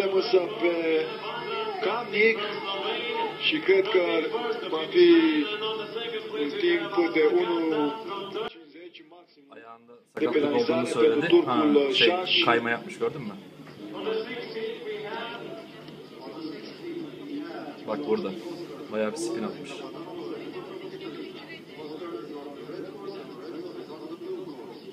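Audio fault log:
8.48–10.17 s, one channel inverted: the sound drops by about 23 dB for roughly 1.7 s, leaving a faint residue before full level returns. The likely cause is reversed polarity on one stereo channel, so that when the two channels are summed to mono, everything common to both cancels, including the centred and low-frequency content. What survives is only the small difference between the channels, which is why only a faint copy of the sound remains.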